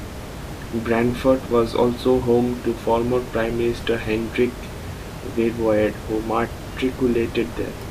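No technical faults can be heard in this speech recording. The room's background noise sits about 12 dB below the speech, as part of the recorded space rather than a system problem.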